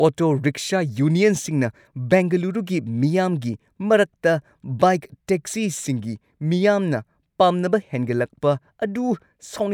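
No technical faults are audible.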